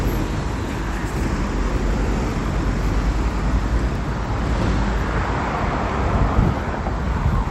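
At 3.62 s there is a brief glitch, a chirp, squeak or burst of noise, around -20 dBFS at its peak. This is a corrupt frame decoded: bit errors reached a few compressed frames, and the decoder played them anyway, putting energy at the wrong frequencies.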